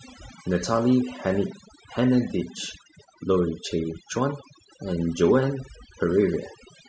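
A speech recording with overdone noise removal running throughout. The noise reduction was set too hard. Frequency bands near its noise estimate get pulled down or cut entirely. The background drops and breaks up into twinkling specks. Quiet parts of the voice go with them.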